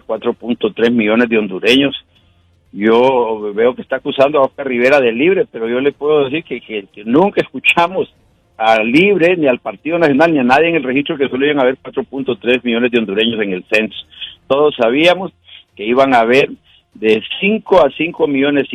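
No technical faults detected anywhere in the audio.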